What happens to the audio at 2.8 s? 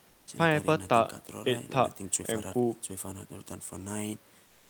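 Nothing goes wrong at 2.8 s; the speech carries on intact through that moment, with no fault to be heard.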